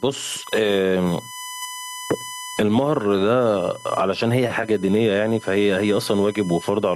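A speech recording carries two faults that run through the whole clip. The first is USB whine, a steady fixed-pitch tone at 1 kHz sitting about 30 dB below the speech. It comes from the USB bus drawing current in 1 ms frames, and that periodic load gets into the audio through the power or ground path. On a spectrogram it shows as a thin, unbroken horizontal line at 1 kHz running the full width of the clip, visible beneath and between the speech energy. The second is gain pumping, with the gain swinging by around 20 dB, leaving loud and quiet passages squeezed close together and the speech sounding squashed. The likely cause is an input gain set far too high with a fast limiter or compressor clamping down on every peak. In the waveform the envelope looks flattened, with peaks pinned near one ceiling.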